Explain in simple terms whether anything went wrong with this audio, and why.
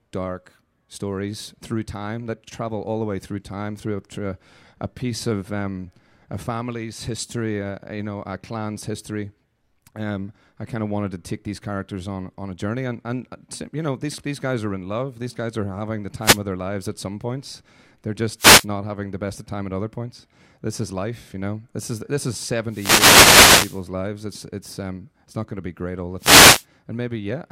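Yes, the wireless microphone's radio signal dropped out briefly four times, causing wireless microphone noise hits. Reflected radio waves cancelled the signal, so receiver hiss surged as bursts of static: 16.21 to 16.40 s before "of their lives at", 18.37 to 18.66 s before "having the best of", 22.67 to 23.83 s, and 26.18 to 26.65 s after "be great all the".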